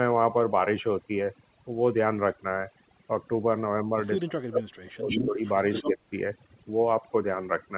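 From start to end, overdone noise removal has cut individual frequency bands hard wherever they sit near the noise estimate. The background drops and breaks up into twinkling specks, and the quieter parts of the speech are stripped away.

From 4.21 to 5.42 s there is speech suppressed in double talk, most likely from an echo canceller that could not tell the near talker from loudspeaker echo while both sides spoke. It pulled the speech down by about 35 dB at its deepest, breaking it up over roughly a second.

Within that stretch, from 4.98 to 5.28 s, comes echo leak. Residual loudspeaker pickup likely slipped past cancellation and returns as a copy 174 ms late, only about 5 dB below the speech. A second leak follows at 5.45 to 5.91 s, with the same 174 ms delay and about 10 dB down.

From 5.86 to 6.0 s there is a shorter double-talk dip, with the speech sinking by about 15 dB.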